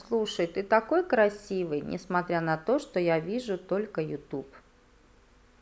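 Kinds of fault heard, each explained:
Nothing in this speech recording stands out as a technical fault, so there's no kind to list here.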